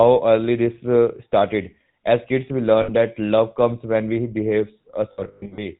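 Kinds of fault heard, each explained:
GSM full-rate codec: Throughout, the speech has a buzzy, gravelly roughness and nothing above 4 kHz, which fits a 13 kbps GSM full-rate stream. The codec models the vocal tract and drives it with sparse, regularly spaced pulses, discarding most excitation detail.
lost GSM frames: Twice the sound freezes into a rough, metallic ring. The first is brief, 2.82–2.9 s after "kids we". The second comes in scattered gaps from 5.12 to 5.66 s after "comes when we behave". Each missing frame is replaced by the settings of the last good one.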